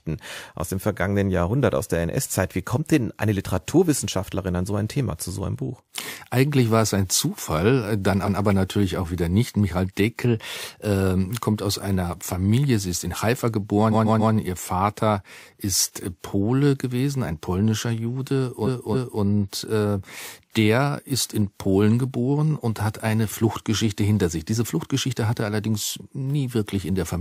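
Repeated frames stutter the speech at 8.25 s (a 139 ms block played twice), 13.91 s (the same length, replayed three extra times) and 18.65 s (279 ms, replayed twice), lengthening the audio by 0.14, 0.42 and 0.56 s.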